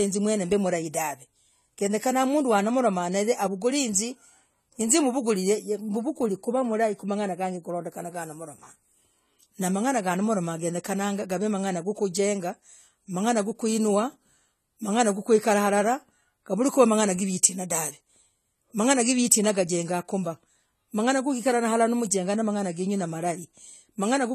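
Throughout, the speech sounds dull and smeared, with nothing above 14 kHz and a warbly fizz, likely AAC compression at a low bitrate, around 32 kbps.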